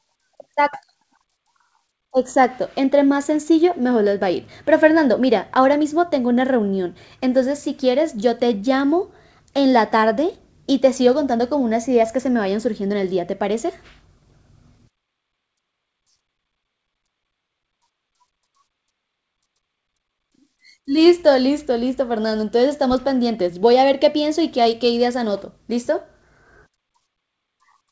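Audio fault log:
throughout: clock drift between sender and receiver. The sender's clock runs about 4 percent fast, so the jitter buffer keeps overfilling and must shed audio to stay current. The result is small, unevenly spaced hiccups through speech whose band stops at 8 kHz.
0.05–27.52 s: repeated timing corrections. Audio arrives at 104 percent of its proper rate, so the receiver repeatedly cuts out short pieces, always dropping rather than repeating, at irregular intervals. Each cut is small.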